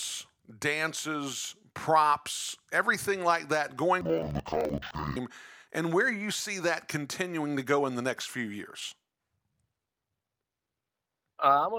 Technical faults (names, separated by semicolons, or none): interleaved audio read as planar